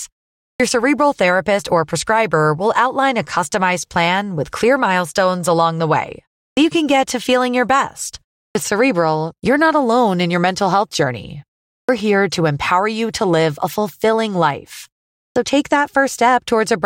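Clipped start after a pause occurs five times: at 0.52, 6.49, 8.48, 11.81 and 15.28 s. Each time, the output goes idle in a gap of 0.3 to 0.46 s. It then needs time to wake. The opening 71 to 80 ms of the next phrase is lost. Speech jumps in abruptly. The first sounds are missing from "cerebral therapist or prescriber" and from the phrases after "feeling your best" and "mental health journey". The pauses themselves fall silent as expected.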